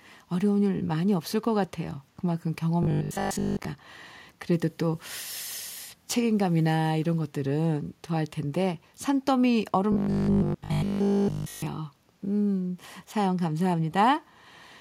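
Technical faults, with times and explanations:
2.83–3.65 s and 9.92–11.66 s, robotic sound from repeated short buffers: audio likely arrived too late, so 20 ms chunks repeated, forcing a rigid, metallic 50 Hz buzz, fuller in the second stretch.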